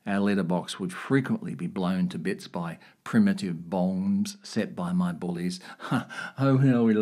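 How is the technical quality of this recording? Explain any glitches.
The speech has one glitch, DAB burbling at 1.78 s, between "letterbox would frequently be" and "to bits by primitive". Weak reception let bit errors corrupt the MP2 data. Wrong samples put short blips of noise in single sub-bands.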